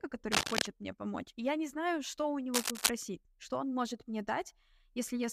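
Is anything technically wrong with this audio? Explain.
Yes. Cable scratch noise appears from 0.31 to 0.67 s, just before "мне помочь и я", and from 2.54 to 2.91 s, between "не знаю что у" and "что он может мне". Both bursts are dense, uneven scratching, roughly 5 dB above the speech. They likely come from a worn cable or connector whose contact resistance jumped around as it moved.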